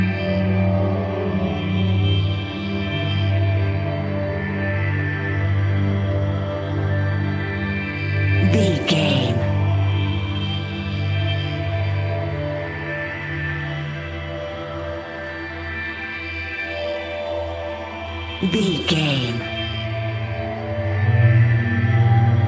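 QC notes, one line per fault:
No faults found. The audio shows the sound of a WebRTC call path, with nothing above 8 kHz, which fits a wideband call codec such as G.722.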